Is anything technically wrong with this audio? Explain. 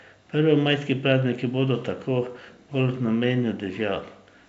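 No, nothing is technically wrong with this audio.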